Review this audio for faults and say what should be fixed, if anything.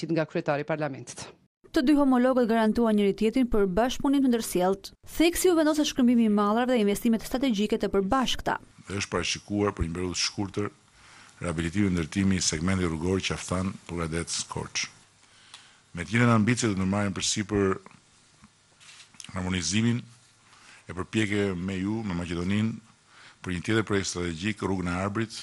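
Nothing needs fixing: the signal holds steady throughout, with no audible breaks, distortion or level problems anywhere in the recording.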